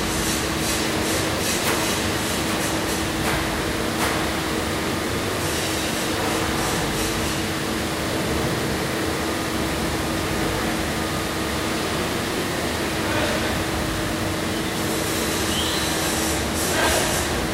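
Processor overload crackle appears three times: from 5.08 to 5.59 s, from 11.99 to 12.88 s, and from 16.64 to 17.43 s. In each stretch the processor repeatedly failed to finish its audio buffers on time. The sound points to very short buffers, well under a millisecond each. Missed buffers were skipped outright, so the sound jumps forward with hard edges at each miss, dozens of times in the first burst and over a hundred in each later one. The result is a gritty crackle riding on the sound until the load clears.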